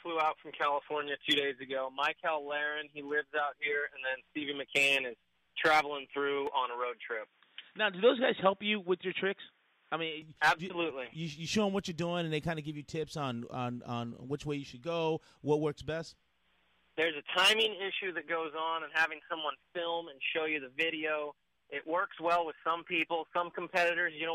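At 6.47 s the sound abruptly goes dull and boxy, with nothing left above about 3.8 kHz, and it comes back to full bandwidth at 10.22 s. The switch is seamless, with no gap. The level shifts by roughly 5 dB, and a faint new noise floor sits well under the signal. That points to the input likely switched to a poorer device, such as another mic or a headset's call profile, for those few seconds.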